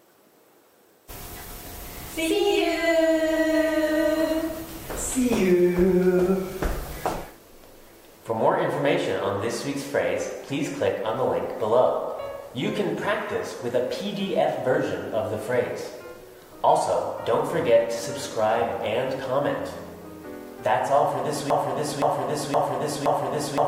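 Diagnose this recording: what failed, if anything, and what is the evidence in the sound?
From 21.50 s to the end, a 0.52 s fragment repeats four times, back to back and identical, in a broken-record loop, likely from a stalled playback or stream buffer re-sending its last block. Unlike echo, the repeats don't decay, and the underlying audio is simply lost.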